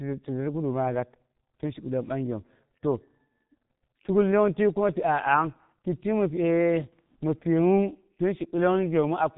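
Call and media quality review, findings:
G.723.1 codec, throughout the speech. Muffled, hoarse tone; consonants smeared. Nothing above 3.8 kHz. 30 ms frames with a slowly updated voice model blur fast transitions. Heavy damage fits the 6.3 kbit/s mode. Component: telephony codec leg.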